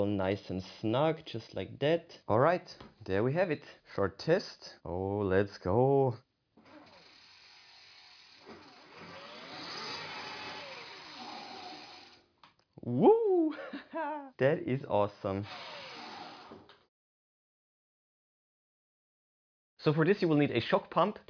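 Nothing goes wrong anywhere along the way here; there isn't a single technical fault to point to.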